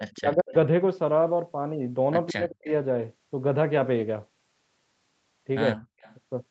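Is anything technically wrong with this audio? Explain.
Yes, there are two kinds of problem here, and both sound like a speakerphone call.

There's an echo leak from 0.0 to 0.12 s and again from 6.0 to 6.15 s: a faint delayed copy of the speech trails by about 170 to 180 ms, well below the main speech, roughly 20 dB down at first and fainter at the end. It's likely a loudspeaker's echo canceller letting part of its mic pickup slip back through.

You'll also hear speech suppressed in double talk from 0.14 to 0.54 s and from 2.29 to 2.72 s. The speech dips hard, by something like 35 to 40 dB at its deepest. That's likely the echo canceller getting confused while both sides talk at once and ducking everything, the wanted speech included.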